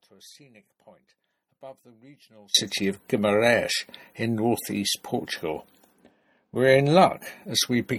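The clip opens mid-dropout to a faint residue. Until 2.54 s only a faint leak remains, roughly 30 dB down. Then sound returns abruptly, likely from a lost signal feed.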